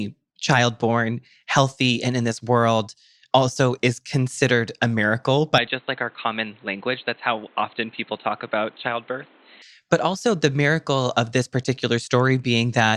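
From 5.58 to 9.62 s the speech turns dull and slightly quieter, cut off above 4.2 kHz with faint new noise, likely an input switched to a poorer device.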